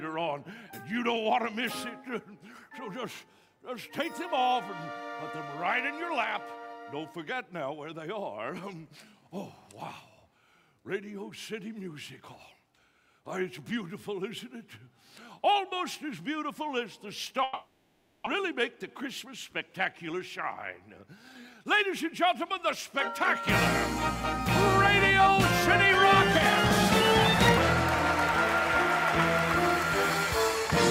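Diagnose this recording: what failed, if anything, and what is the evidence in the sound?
Long network dropout, 17.43 to 18.28 s, likely at the network stage: for 830 ms the last sound is stretched into a fading buzz or hiss, with no gap of silence. About 600 ms of audio never returns, and playback resumes roughly 200 ms later than before.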